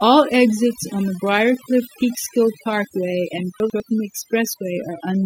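Overdone noise removal runs through the whole speech clip. A noise reducer set far too hard pulls individual frequency bands down or out whenever they sit near its noise estimate, taking quieter parts of the voice too. The background becomes near-silent with twinkling specks.

Chunks out of order occur from 3.6 to 3.8 s. A 100 ms chunk lands one position late and plays after the piece meant to follow it. Nothing is missing, but the swapped order and hard joins produce a brief jumbled stumble.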